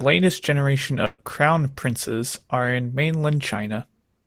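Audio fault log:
1.05–1.21 s, burst of packet loss: a run of audio failed to arrive in time, so the receiver extended the last sound for 131 ms, fading it, then left 20 ms of silence. Playback resumes at "crown princes are in", with 140 ms of speech skipped.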